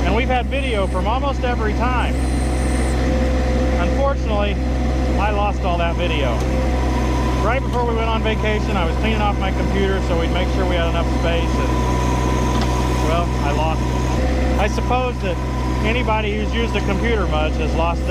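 No technical faults are audible.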